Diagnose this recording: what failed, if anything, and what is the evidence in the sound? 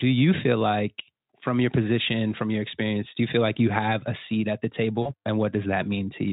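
The network stage failed briefly: VoIP packet loss concealed by the speech codec, from 5.02 to 5.11 s, right after "a seat at the". About 40 ms of audio is missing, which points to two lost 20 ms frames. The Speex decoder, clean enough elsewhere, filled the gap by repeating its last pitch and filter with falling gain. The result is a short stretched sound that fades. On a spectrogram, a frozen, steady spectrum replaces normal formant motion, and the waveform shows a decaying envelope.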